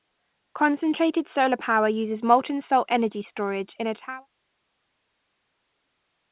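Listening to the speech from beginning to end, nothing stood out as a technical problem.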